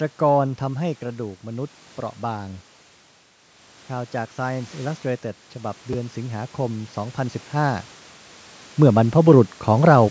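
At 5.93 s the speech catches on a tiny jumbled blip, a quick gritty flick that is over almost before it registers. This is chunks out of order: a slice of about 5.8 ms arrived one chunk late and was played after the slice that should have followed it. No audio is lost, but the swapped order leaves three hard joins.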